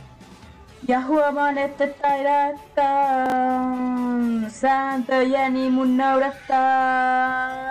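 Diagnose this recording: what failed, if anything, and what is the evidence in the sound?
Chunks out of order, at 3.26 to 3.32 s: a brief jumbled, garbled moment. One 20 ms block of audio plays two blocks late, after the blocks that should follow it. No sound is missing, but the wrong sequence creates three hard joins. The failure sits at the buffering or transport stage, most plausibly a jitter buffer or write queue that released a delayed block instead of slotting it back into place.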